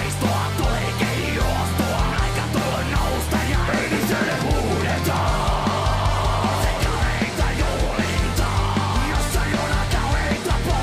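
No technical faults are audible.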